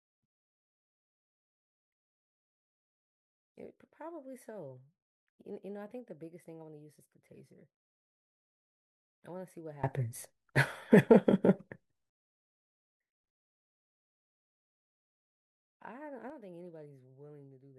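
Speech clip with two sudden gain jumps: level and background noise rise together by about 24 dB from 9.84 to 12.10 s, then drop about 6 dB from 16.30 s to the end, likely from unramped digital gain changes.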